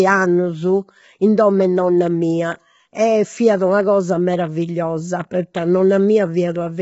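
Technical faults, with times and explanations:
Throughout, low-delay AAC compression: the speech sounds rough and grainy, with a hiss-like noise filling the gaps between the voice's harmonics and nothing at all above 7.7 kHz. This is likely the low-delay AAC-ELD codec at heavy compression, consistent with about 16 kbps. Its short frames cannot resolve pitch harmonics finely, so grain sits inside the voiced sound itself rather than as the watery, swirling artefacts of longer-frame codecs.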